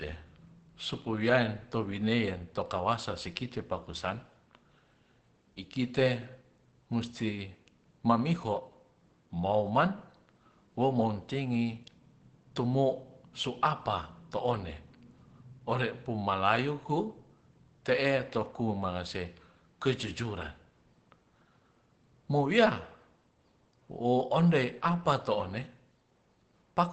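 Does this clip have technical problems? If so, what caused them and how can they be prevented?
Yes. Throughout the speech there is plainly audible damage from Opus compression, likely run at a low bitrate in its SILK speech mode. The audio sounds muffled and hoarse, with a hard ceiling leaving nothing above about 8.8 kHz. That wideband limit fits a bitrate near 16 kbps, where the encoder drops detail to fit its budget. On a spectrogram this appears as a flat cutoff at 8.8 kHz for the whole clip, with empty space above it. To prevent it, encode at a higher Opus bitrate so the encoder keeps full bandwidth.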